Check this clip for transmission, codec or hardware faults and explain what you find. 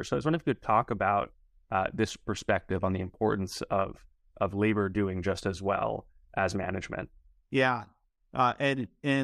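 Nothing stood out on listening to this speech recording that would point to a problem with the transmission path, the encoding or the equipment.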